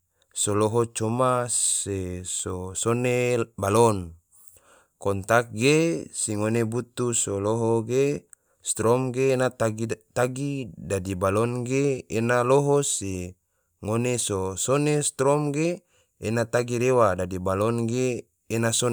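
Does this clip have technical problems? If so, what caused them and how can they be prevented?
No, no faults are audible.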